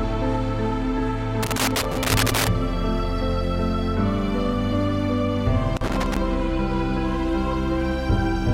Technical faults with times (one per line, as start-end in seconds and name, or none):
1.43-2.48 loose connector crackle
5.77-6.17 loose connector crackle